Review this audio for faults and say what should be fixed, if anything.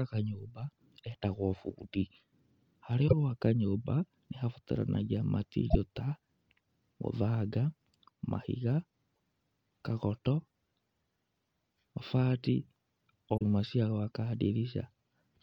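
Damaged data in a compressed stream: four stretches of the encoded speech arrive corrupted, so the decoder misreads those frames, loses sync and hunts for the next valid frame header. Each is heard as a short chirp or blip cutting into the speech, at 3.05 to 3.13 s, 5.66 to 5.75 s, 9.11 to 9.17 s and 13.34 to 13.42 s, each lasting roughly 60 to 100 ms. To prevent this, verify file integrity with checksums on transfer and storage, and re-encode or re-fetch from a clean source.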